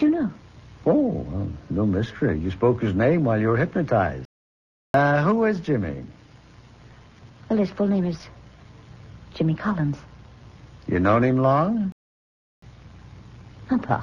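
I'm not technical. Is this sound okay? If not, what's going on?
No. Two playback stalls, at 4.25 to 4.94 s and 11.92 to 12.62 s, each silence about 0.7 s, likely a starved or blocked player.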